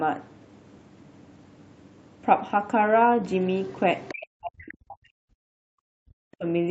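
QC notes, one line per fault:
3.45–4.26 s, other side's voice leaking through: a second, fainter voice sits under the talker at roughly 20 dB below the speech. It likely comes from the far end playing on a loudspeaker, with the echo canceller leaving a remnant in the microphone feed. On a spectrogram it shows as a weaker, separate set of harmonic bands interleaved with the main voice. In the waveform it appears as a low-level envelope that doesn't follow the talker's syllables.
4.13–5.28 s and 5.74–6.45 s, speech suppressed in double talk: the talker's level collapses by as much as about 40 dB in pieces, for around one second in the first span and about 0.7 s in the second. This is likely the echo canceller turning everything down while both sides talk at once, because it cannot tell its own talker from the loudspeaker echo. The waveform shows abrupt gouges in the envelope. The spectrogram shows energy blanking out across the whole band, which ends at 8 kHz from the call's microphone processing.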